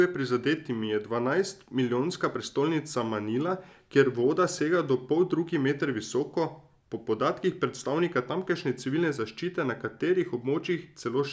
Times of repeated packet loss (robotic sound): none

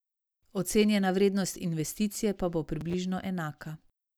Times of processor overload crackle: 2.81-2.94

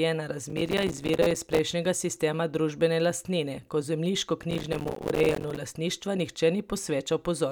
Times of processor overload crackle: 0.50-1.63, 4.51-5.57

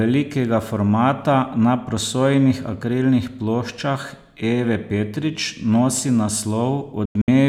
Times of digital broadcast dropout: 7.05-7.28

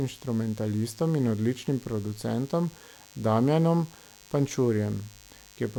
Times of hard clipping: none

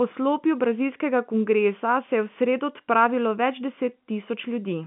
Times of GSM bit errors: none

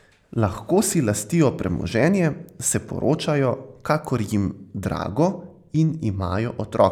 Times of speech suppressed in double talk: none

